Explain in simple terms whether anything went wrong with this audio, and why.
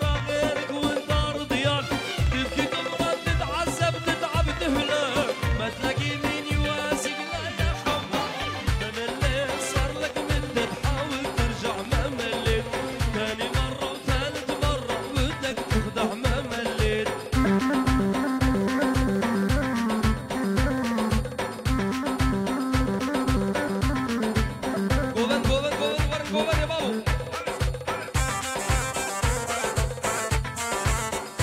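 From about 0.09 s to 12.09 s there is a train of clicks: a run of around a hundred similar ticks, roughly seven per second but unevenly spaced, sitting on top of the sound and carrying on through the quiet gaps. That steady repetition of the same sharp tick sets it apart from a one-off pop or a random crackle. The likely cause is electrical interference from nearby equipment or a faulty connection or power supply.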